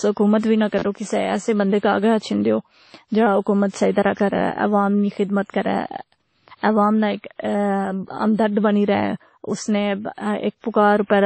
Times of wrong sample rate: none

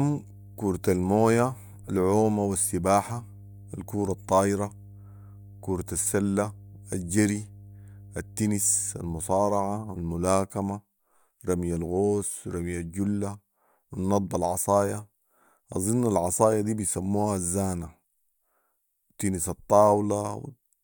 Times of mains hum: 0.00-10.00

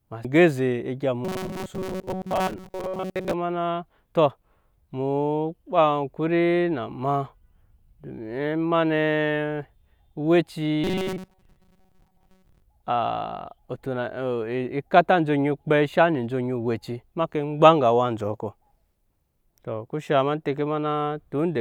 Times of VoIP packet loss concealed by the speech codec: none

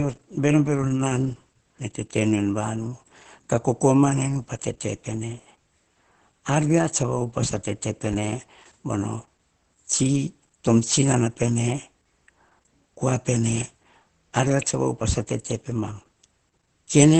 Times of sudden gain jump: none

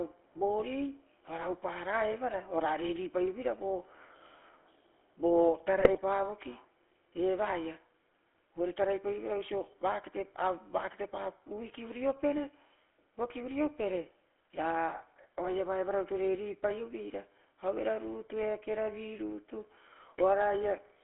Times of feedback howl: none

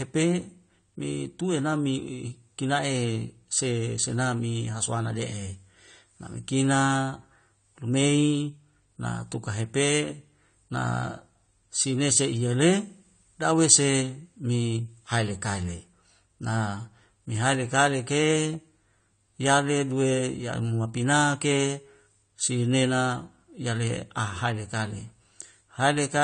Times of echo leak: none

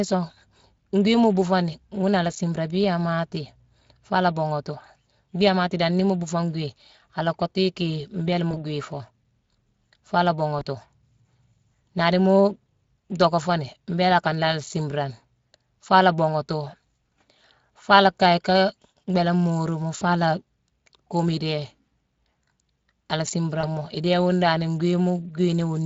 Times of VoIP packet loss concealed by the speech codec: 8.51-8.61, 10.59-10.64, 15.49, 19.97-20.04, 23.61-23.69

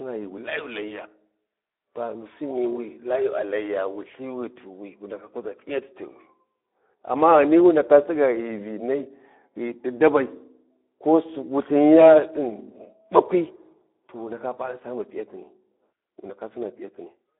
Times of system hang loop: none

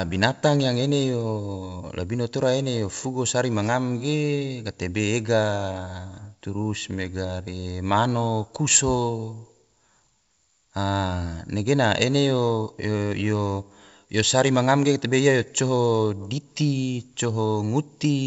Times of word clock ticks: none

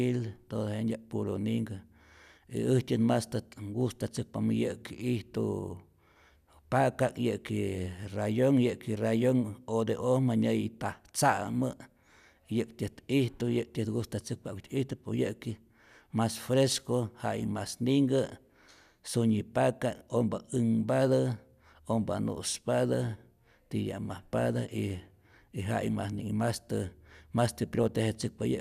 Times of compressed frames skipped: none

